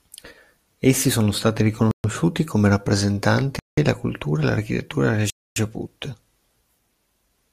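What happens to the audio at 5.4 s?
The speech drops into a Bluetooth stall just after "la cultura e l'architettura". From 5.30 s to 5.56 s the sound cuts to complete silence for about 262 ms. Then playback picks up again. The likely cause is radio interference delaying packets on the wireless link. The headphones' buffer emptied while they waited. Nothing could play until the resent data arrived, so the audio simply stopped.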